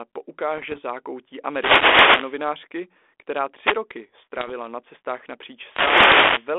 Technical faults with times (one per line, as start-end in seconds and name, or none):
0.57-0.80 bit errors on an ADPCM link
1.44-2.44 wireless microphone noise hit
3.59-3.77 wireless microphone noise hit
4.39-4.54 bit errors on an ADPCM link
5.62-6.53 wireless microphone noise hit